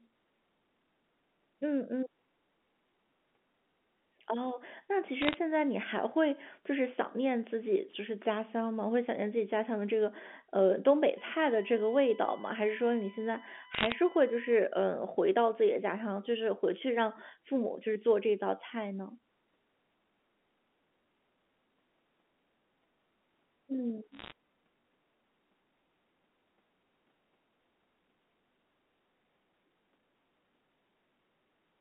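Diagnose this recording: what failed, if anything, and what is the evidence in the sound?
Bit errors on a digital phone line, at the transport stage. Sharp isolated ticks form brief crackle bursts at 5.22 to 5.36 s, 13.74 to 13.92 s and 24.12 to 24.32 s, over otherwise unchanged speech. Each flipped bit corrupts a single A-law sample. Hits on the sign or high bits swing it far off the waveform, at error rates around half a percent to one percent. A waveform shows lone one-sample spikes, and a spectrogram shows thin full-height vertical lines.

USB whine, entering through the power or ground at the converter and analogue wiring. From 11.18 to 14.59 s a fixed-pitch whine sits about 20 dB below the sound. It is based on 1 kHz with its strongest component at 15 kHz. That component lies far above the 200 to 3400 Hz telephone band, so the whine joined after the phone coding. It comes from current drawn in 1 ms bus frames. 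A spectrogram shows flat horizontal lines at 1 kHz multiples.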